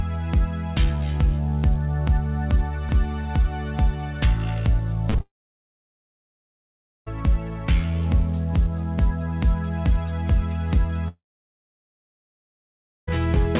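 At 5.10 to 5.16 s and again at 5.18 to 5.21 s there is short concealed packet loss. About 40 ms and then 20 ms of audio failed to arrive, and the receiver bridged each gap by extending the preceding sound before blending back. Each gap is heard as a brief smear or wobble rather than a hole, and the sound on both sides continues. That continuity is what separates it from a dropout. The audio is band-limited throughout, with nothing above 4 kHz, which fits a 64 kbps G.711 mu-law call path.

Right after the second gap, from 5.21 to 7.08 s, comes a long network dropout. The likely cause is a stall in packet delivery. The concealment fades within a fraction of a second, leaving about 1.8 s of silence, and the audio resumes with that stretch simply missing. A second dropout runs from 11.08 to 13.09 s, with about 1.9 s of silence. Unlike the short losses, these leave an audible gap and skip part of the audio.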